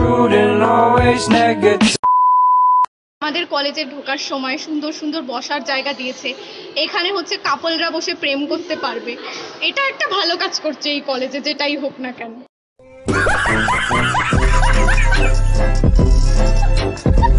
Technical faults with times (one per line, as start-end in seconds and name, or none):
none